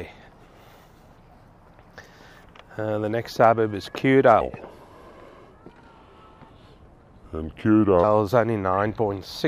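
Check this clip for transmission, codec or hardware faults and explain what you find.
One fault is present: a section at the wrong speed from 4.41 to 8.04 s. There the sound plays at 0.774 times its recorded rate, likely from being clocked at the wrong rate. Pitch drops about four semitones and timing stretches together, unlike a pitch-shift fault, which lowers pitch but keeps the original pace.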